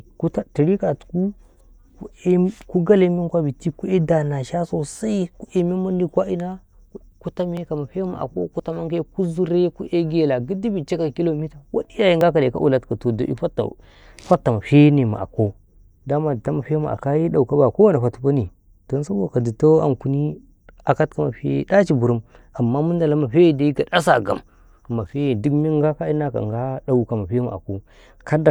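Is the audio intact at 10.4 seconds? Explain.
Yes, the audio is intact at 10.4 seconds, with no fault at that moment.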